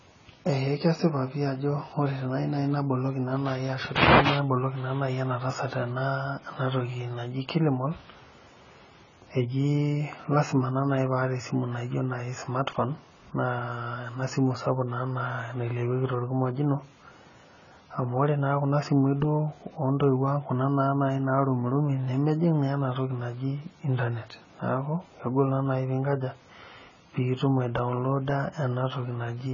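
A speech recording carrying heavy AAC compression damage from start to finish: nothing survives above 7 kHz, and the sound is dull and smeared, with a watery warble on sustained vowels and a fizzy, grainy edge on sibilants. The likely cause is AAC-LC encoding at a very low rate, which fits roughly 16 kbps. On a spectrogram the energy stops at a flat ceiling at 7 kHz, with blotchy gaps or patchy noise-filled bands beneath it.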